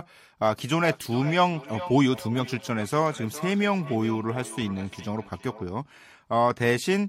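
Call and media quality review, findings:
Feedback echo between two devices, 0.64–5.7 s. Speech returns roughly every 0.4 s, peaking about 14 dB below the direct speech. Probable component: a second device in the same room playing the call. Its output re-enters this microphone, outside the local echo canceller's reference.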